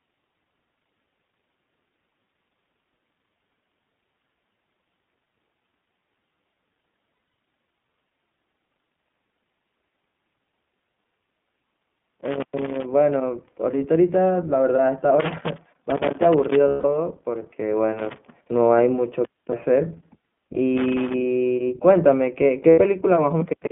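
The speech throughout has been squeezed through the iLBC codec, whose 20 ms frames fit its 15.2 kbps mode. The line keeps only about 200 Hz to 3.5 kHz, so the sound is thin and boxy. The codec's frame-by-frame rebuilding of the excitation leaves a plainly audible rough, slightly synthetic grain.

From 7.14 to 7.34 s, packets carrying iLBC frames went missing: about 140 ms lost, scattered across 200 ms in runs of up to roughly 70 ms. The decoder filled each hole by repeating the last pitch period with noise mixed in, so the sound stutters into brief held, buzzy fragments before snapping back.

A loose connector then makes and breaks contact from 11.06 to 12.86 s. The intermittent contact chops the signal, producing an irregular scratchy crackle. The same crackle returns from 15.20 to 16.55 s.

Right after, at 16.68 to 16.85 s, lost iLBC frames strike again. This 160 ms loss fits eight consecutive 20 ms frames. 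The concealment stretches into a sustained, breathy, vowel-like drone that fades slightly before normal decoding resumes almost at once.

Connector crackle recurs briefly at 17.99 to 18.31 s and 20.77 to 21.14 s, short bursts of the same rough scratching.

Finally, at 22.70 to 22.80 s, about 80 ms of lost frames produces a short buzzy smear.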